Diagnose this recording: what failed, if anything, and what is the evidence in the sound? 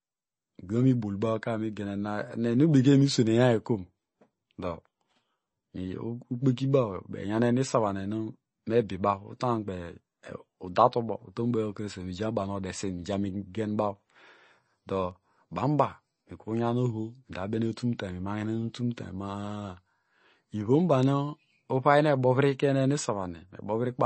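The speech sounds watery and swirly throughout, with chirpy, metallic sibilants and nothing above 8.3 kHz. The codec stage is at fault, likely MP3 compression at a bitrate around 32 kbps, where the encoder cuts the treble and weak frequency lines flicker between frames.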